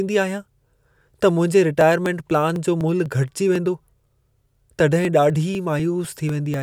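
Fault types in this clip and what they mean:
Periodic USB or driver dropouts: From 1.81 s to 6.54 s, something stalls the audio path about every 0.25 s, and roughly a millisecond of speech is skipped each time. The splice shows up as a regular tick, about twenty in all, audible only while speech is present. On a spectrogram these are evenly spaced thin vertical broadband lines. In the waveform they appear as small abrupt jumps where the two ends of the gap fail to meet.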